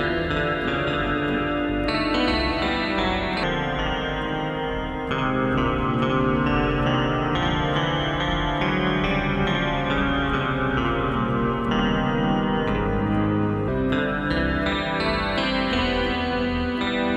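From 3.43 to 13.68 s there's a section at the wrong speed, running at 0.794x, likely a clock mismatch, so everything drags and drops about four semitones lower.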